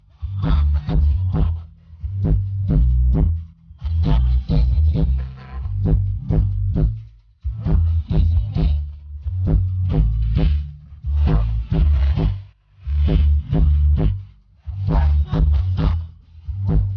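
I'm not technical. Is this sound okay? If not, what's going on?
Yes, this sound is fine; nothing here needs fixing.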